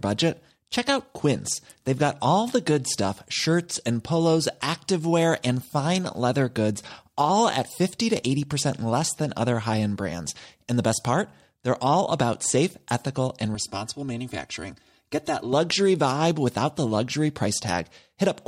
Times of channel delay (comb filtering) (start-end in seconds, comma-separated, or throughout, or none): 13.55-15.53